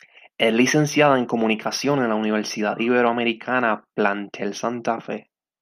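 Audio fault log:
Nothing stood out on listening to the speech here.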